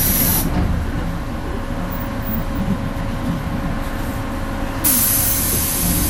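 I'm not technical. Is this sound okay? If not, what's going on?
No. The whole recording sounds dull and gurgly, with the top treble missing, which is likely MP2 compression: a steady murk rather than sudden breaks. At 3.44 and 5.46 seconds there are overlapping chunks, where a tiny 23 ms sliver plays twice, heard as a brief stutter about 2 seconds apart rather than a dropout.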